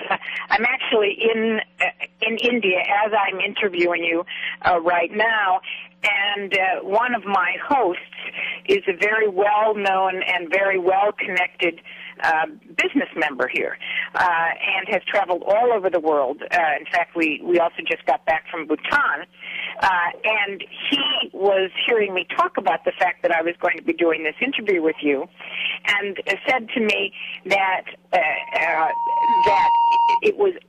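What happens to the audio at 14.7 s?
Nothing goes wrong at 14.7 s; the audio plays through that moment intact, with no dropout, click or other fault.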